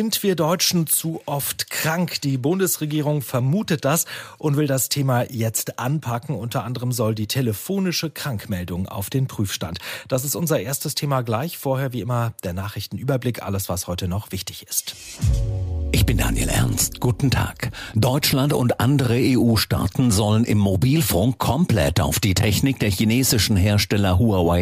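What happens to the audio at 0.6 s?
Nothing goes wrong at 0.6 s; the audio plays through that moment intact, with no audible fault.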